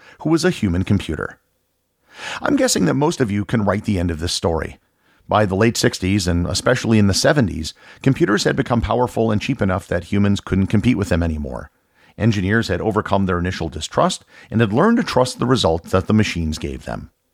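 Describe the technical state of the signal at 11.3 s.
At 11.3 s the speech signal is intact, with no fault present at that moment.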